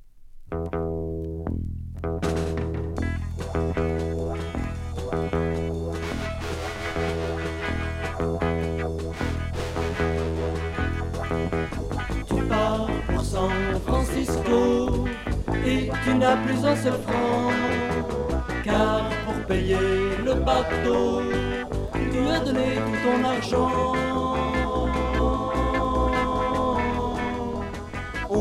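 Nothing in this clip stands out as a technical fault; the audio runs along without any glitches, dropouts or other problems worth pointing to.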